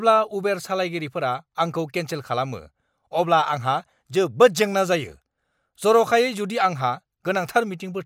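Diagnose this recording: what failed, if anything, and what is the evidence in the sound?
Nothing failed; no fault is audible anywhere here.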